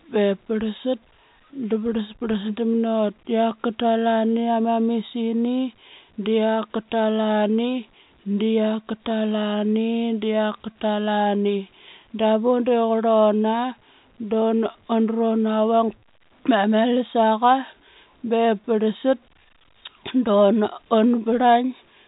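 Nothing goes wrong anywhere in this speech, and the G.711 telephone coding just does its usual job, with everything topping out around 3.8 kHz the way a landline call does.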